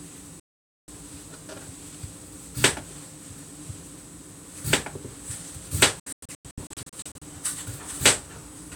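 Digital broadcast dropouts at 0.40–0.88 s and 5.99–7.22 s: the receiver lost valid frames and muted, cutting the sound within about 3 ms. The first is one solid gap of 480 ms. The second is 576 ms of silence scattered as short holes up to 96 ms long across 1.2 s.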